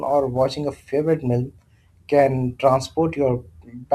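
From the start to 2.79 s, the converter's sampling clock wanders, a case of sample clock jitter on the order of a few microseconds. Each sample lands a little early or late, and the resulting error scales with how steeply the speech waveform is changing at that instant. It comes through as a fine hiss and graininess sitting roughly 35 dB below the signal, strongest on loud and bright sounds and gone in the pauses.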